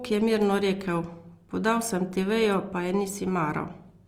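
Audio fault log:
throughout, Opus compression: the speech keeps its full bandwidth but sounds plainly rough and grainy, with a noisy fizz in the upper bands instead of the swirling, hollow gaps of MP3. This likely comes from Opus music-mode band filling, consistent with a rate near 24 kbps.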